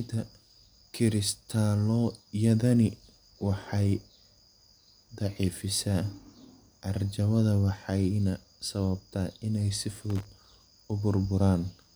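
From 10.10 to 10.25 s, loose connector crackle: a dirty contact chops the speech, heard as scratchy bursts, with jagged spikes and broadband vertical streaks.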